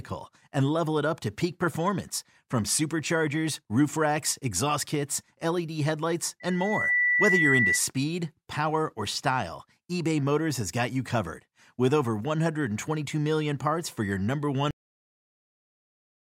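A speech recording in which, from 6.40 to 7.82 s, a pure tone at 2 kHz swells over roughly half a second into a piercing squeal, ending up about 5 dB louder than the speech. This is loudspeaker feedback squeal: the microphone is picking up the loudspeaker it feeds, and at 2 kHz the loop gain exceeds one, so that frequency keeps reinforcing itself. Then at 14.71 s the audio stops abruptly in mid-sound and falls straight to digital silence with no decay. This is a cut-off end, with the final stretch of audio never written or played out.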